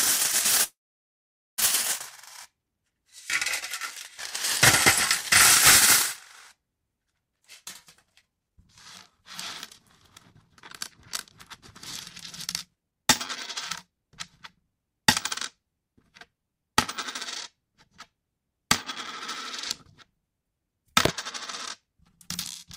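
At 0.63 s the sound stops and a call audio freeze begins. It lasts until 1.60 s. For a moment the last sound carries on as a fading buzz or hiss. Then about 0.84 s of silence follows. Packets were likely held up in transit, and the jitter buffer ran empty. When they arrive, the sound resumes where it left off. Nothing is lost. The whole stream is now about 0.95 s later than before.

Three jitter buffer speed-ups follow. They come after the buffer has built up too much audio. The receiver trims it back by cutting tiny pitch-period slices, many times in a row. The pitch stays the same, but the sound rushes. From 7.32 to 8.58 s it plays at 136% speed and sheds roughly half a second. From 12.66 to 13.05 s it runs at 176%, the most hurried stretch, and loses about a third of a second. From 13.87 to 14.16 s a milder 118% speed-up trims a small amount more.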